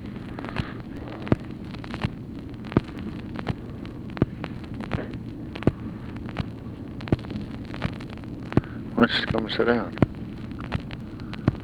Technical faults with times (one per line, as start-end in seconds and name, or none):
0.97 overlapping chunks
2.98 overlapping chunks
4.98 overlapping chunks
6.99 overlapping chunks
9.00 overlapping chunks
11.00 overlapping chunks